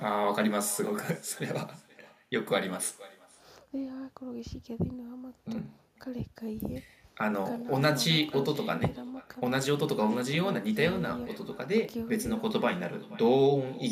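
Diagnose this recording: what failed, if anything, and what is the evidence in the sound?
Call processing failed: this is echo with no canceller. Throughout the speech, every phrase returns about half a second later as a faint, thin copy roughly 23 dB below the talker. The far end's loudspeaker feeds its microphone, and nothing in the call path removes that return.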